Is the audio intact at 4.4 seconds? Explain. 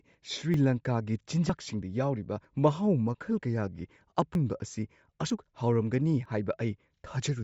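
No. At 4.35 s the recording likely dropped a piece of audio while closing one chunk and opening the next, a handoff that fits one-second processing blocks. About 50 ms of speech is lost, and the material on either side is butted together with no silence in between. The result is a sudden skip in the speech, just short of the 4.4 s mark, where time seems to jump forward rather than pause.

That moment also carries the Bluetooth LC3 compression present across the whole clip. It is likely caused by a low-rate LE Audio link, and the character fits roughly 32 kbps with 10 ms frames. The encoder discards much of the upper spectrum and fills it with synthetic noise, and nothing survives above 7.7 kHz. The damage is plainly audible, giving the speech a dull top end with a breathy, grainy edge.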